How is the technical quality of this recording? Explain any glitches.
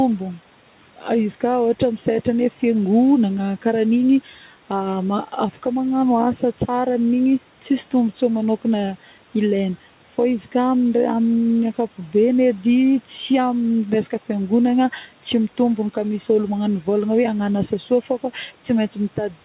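The recording has two brief dips where speech is cut by the noise suppressor. The audio stops at 4 kHz, as on a narrowband phone call. A room noise sits about 23 dB below the speech.

The first dip falls between 0.74 and 1.04 s, and the second between 17.88 and 18.36 s. The suppressor mistook quiet parts of the speech for background noise and turned them down. The first dip goes about 12 dB deep over roughly 150 ms, and the second about 7 dB over roughly 100 ms. Soft sounds there seem swallowed and faint.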